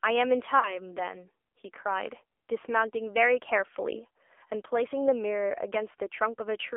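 Throughout, the AMR narrowband mobile codec confines the sound to about 300 Hz to 3.4 kHz, with plainly audible buzzy, synthetic coloring that fits its 7.4 kbps mode. From 0.60 to 0.81 s, a lost AMR speech frame makes the decoder repeat its previous settings at falling gain, heard as a brief dip or warble.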